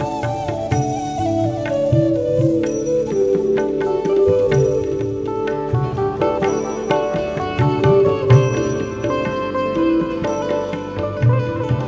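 Nothing stood out on listening, the audio simply carrying the limited bandwidth of the G.722 call path, with nothing above 8 kHz.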